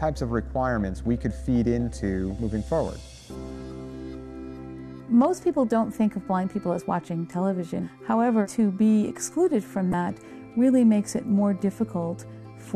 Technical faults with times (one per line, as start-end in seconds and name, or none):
9.90-9.94 damaged data in a compressed stream